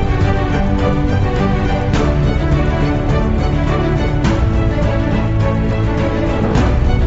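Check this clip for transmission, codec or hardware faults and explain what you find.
No transmission, codec or hardware faults turn up anywhere in this clip. The audio has passed through a WebRTC call path and stops at 8 kHz, a wideband ceiling that fits G.722 at around 64 kbps.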